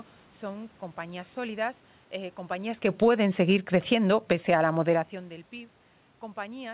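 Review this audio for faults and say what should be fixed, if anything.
From 2.78 to 5.41 s the speech and the room noise behind it sink together by about 6 dB. This is automatic gain falling: the gain control judged the input too loud, shortly after the talker moved around 2.5 s, and lowered its gain gradually. To prevent it, slow the gain control's attack and give it a higher threshold so brief changes in talker distance don't trigger a cut.

Overlapping that, from 3.13 to 5.02 s, speech and background swell by about 4 dB. This is automatic gain rising: the gain control heard the input as too quiet and pushed its gain up while the falling correction was still under way, so the two adjustments pull against each other. To prevent it, run a single automatic gain stage, or disable one of them, so that two controllers never correct the same signal at once.

The 4 kHz ceiling heard throughout comes from the narrowband G.711 mu-law call codec at 64 kbps.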